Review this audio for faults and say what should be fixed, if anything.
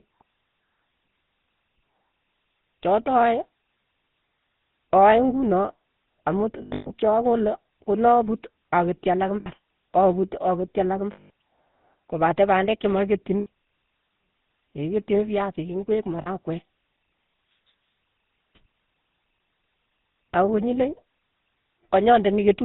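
The whole recording carries GSM full-rate codec coloration: the speech has a buzzy, gravelly roughness and nothing above 4 kHz, which fits a 13 kbps full-rate GSM stage somewhere in the chain. That codec models the vocal tract and excites it with a sparse, regularly spaced pulse train, so fine detail in the excitation is discarded and the damage is plainly audible. To prevent it, capture or route the audio over a wideband path rather than a GSM full-rate link.

Lost GSM frames occur six times. From 6.62 to 6.94 s, just before "che akole konaput aketchi", about 240 ms of frames are missing, scattered over 280 ms, with the longest run around a tenth of a second. Shorter losses follow: 9.40–9.47 s (60 ms) right after "akole konaput aketchi alak", 11.12–11.30 s (180 ms) right after "aketchi alak", 13.40–13.47 s (60 ms), 16.22–16.28 s (40 ms) and 20.12–20.16 s (40 ms). At each gap the decoder repeats the last good frame's parameters, so the sound freezes into a rough, metallic ring. 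To prevent it, improve the radio link or transport reliability so frames arrive intact.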